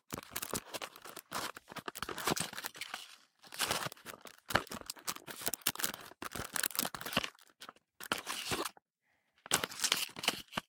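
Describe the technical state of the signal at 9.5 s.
At 9.5 s the signal is intact, with no audible dropout, click, distortion or other fault in the audio at that point.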